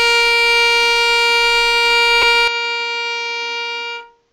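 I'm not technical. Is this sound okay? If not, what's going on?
No. Two faults stand out.

At 2.22 s there are lost LE Audio frames: a tiny gap of about 10 ms, which fits a single lost frame on the Bluetooth link. The receiving decoder filled it by reusing the sound that had just played, with its fine detail scrambled, so you hear a brief grainy smear instead of a clean break. It passes almost instantly.

From 2.48 s to the end, the sound changes character with no gap at all. The top end is cut off above 7.6 kHz, so it turns duller and more boxy. It also gets a bit quieter and picks up a faint new background hiss. This is most likely an input switched to a poorer device, with the system quietly changing to a lower-quality microphone partway through.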